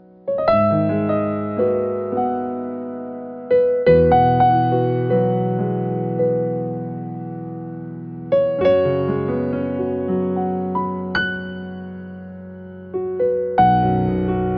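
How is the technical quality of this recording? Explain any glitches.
No glitches or faults audible.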